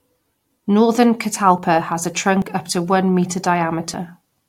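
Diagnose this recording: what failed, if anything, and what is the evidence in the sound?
At 1.58, 2.42 and 3.94 s the speech skips forward, losing roughly 20, 20 and 70 ms. This is likely a dropped buffer (overrun) at the driver stage, where samples were overwritten before being read. The waveform shows hard splices with no silence, and the spectrogram shows thin broadband vertical lines.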